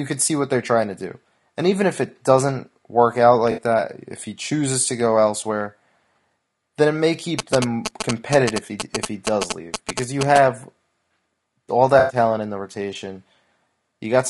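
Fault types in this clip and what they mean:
Low-delay AAC compression: Speech sounds rough and grainy throughout, likely from AAC-ELD near 32 kbps. Spectrograms show blurred harmonics, noise filling the gaps between them, and a thin top band.
AAC frame loss with concealment: Lost frames were patched from earlier spectrum. At 3.51 s after "it doesn't work out" (60 ms) and 11.99 s before "in the rotation" (100 ms), there are smeared, noisy blotches.
GSM signalling bursts: From 7.39 to 10.38 s after "then it may", galloping 217 Hz buzzes sound about as loud as speech. They appear as stacked vertical striations and clustered waveform spikes.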